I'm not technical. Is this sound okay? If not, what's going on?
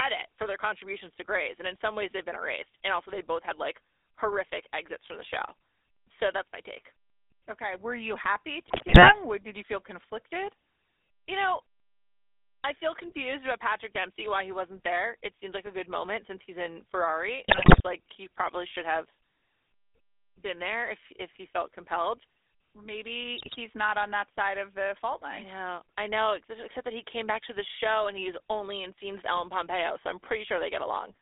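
No, not quite. The whole clip has been through the GSM full-rate codec, the compression used by early mobile phones. It rebuilds the speech from a simplified model driven by a rough pulse pattern, so everything has a buzzy, gravelly edge, and that roughness is easy to hear here. The phone line also trims the range to roughly 300 Hz to 3.6 kHz, so there's no real bass and no crisp top end.

There are also three short bursts of GSM bit errors, where corrupted data got through to the decoder. For a moment it gets the tone or the loudness wrong, and the speech turns into squawks, pops and a gargly mess. The first runs from 8.68 to 9.21 s, right after "you happy". The second is at 17.48 to 17.81 s, just before "like he probably should". The third is at 23.38 to 23.57 s, just before "not on that side". The middle one is the roughest.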